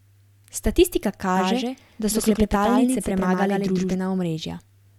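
From 1.37 s to 3.95 s there's a doubled audio track: a full-band copy of the speech trailing about a tenth of a second behind, a few dB quieter, with no room tail. It cuts in and out abruptly, likely from a second, slower capture path.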